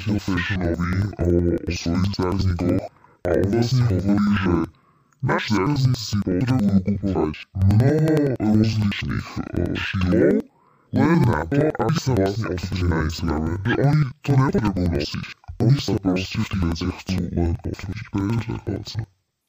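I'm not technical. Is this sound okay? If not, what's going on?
No. Interleaved audio read as planar: the stereo channels were unpacked wrongly, so the speech sounds an octave low, doubled and choppy throughout, in chunks of about 93 ms.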